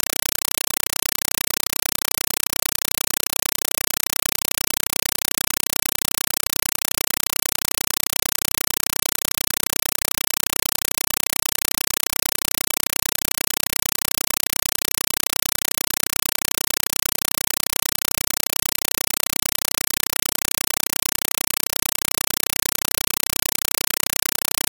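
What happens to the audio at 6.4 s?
Compressed stream played as audio at 6.4 s, as throughout the clip: an AC-3 (Dolby Digital) stream is being treated as ordinary samples and never decoded. Each coded frame comes out as a burst of noise about 5.33 ms long followed by silent padding, repeating 31.25 times a second. The result is very loud, chattering static in place of the sound, from a 256 kbps stream.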